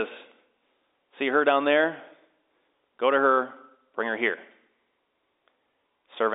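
Nothing stood out on listening to this speech, which carries the narrow band of an ordinary telephone line.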